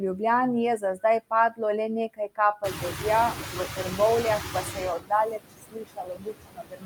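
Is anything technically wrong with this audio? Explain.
Yes. Three related faults come from a noise suppressor working on this speech clip.

Noise suppressor artifacts run through the whole clip. The suppressor estimates the steady background and turns down each frequency band it judges to be noise, frame by frame, here by about 6 dB. Because that decision keeps changing, the leftover background dips in the gaps and swells back under the speech.

Speech cut by the noise suppressor happens at 0.78–1.04 s, 1.5–1.61 s, 2.08–2.39 s, 2.62–3.04 s, and from 4.99 s to the end. The suppressor mistakes parts of the speech for noise and pulls them down with the background. The drops are about 11, 18, 20, 9 and 22 dB. In the first four spots roughly a tenth of a second of speech is affected each time. Soft consonants and word endings sound swallowed or faint, and the final stretch is the most heavily muted.

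Noise suppressor catching up runs from 2.63 to 4.9 s. The room noise, which is part of the recording, jumps by about 20 dB around 2.5 s and settles only about 6 dB below the speech. The suppressor's noise estimate lags behind that jump. The louder background first comes through with less reduction, then sinks gradually as the estimate adapts over about 2.3 s, reaching a cut of about 9 dB.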